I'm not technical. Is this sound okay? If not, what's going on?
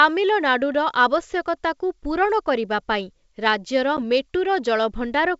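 No. At about 3.97 s there is a brief packet loss on an ADPCM call. A tiny slice of the speech, 10 ms, about one packet's worth, never arrived and was replaced by silence. This style of coding predicts each moment from the last, so the receiving end briefly loses track. You hear a sharp little gap, and the speech comes back slightly distorted before settling. The wideband G.722 telephone coding is working as designed.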